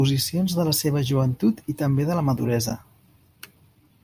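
No technical faults can be heard in the recording, and the speech signal stays continuous and steady from its first moment to its last.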